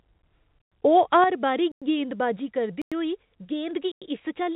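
At 0.62 s the speech drops out for a tenth of a second with abrupt edges, a gap between chunks. The same 100 ms hole returns at 1.72, 2.82 and 3.92 s, exactly one second apart. That spacing shows the audio was passed along in 1.0 s chunks, with silence left at each join. The sound resumes where it stopped, so nothing is lost, but each join is interrupted.

From 0.97 to 1.24 s the loudest syllables take on a harsh, crackly edge. This is microphone overload. The peaks ran about 2 dB past the converter's ceiling and their tops were squared off, with roughly one or two percent of samples flattened. The likely cause is an input volume set too high.

At 1.24 s, immediately after that distorted stretch, the speech and the background fall together by about 7 dB in a single step. A smaller drop of about 2 dB follows at 2.36 s. These are the microphone volume stepped down. The call software likely reacted to a microphone it found too loud by lowering the device's input gain in one move rather than gradually, so the level changes suddenly.

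All of this reaches the listener through a WebRTC call path, where nothing is heard above 4 kHz, which fits a G.711 mu-law codec at 64 kbps.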